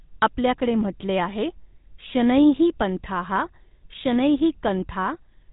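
GSM full-rate coding runs through the whole clip, from start to finish. The speech is rebuilt from a vocal-tract model driven by a sparse, regular pulse train, which fits the 13 kbps full-rate codec. Nothing survives above 4 kHz, and the voice has a plainly audible buzzy, gravelly roughness.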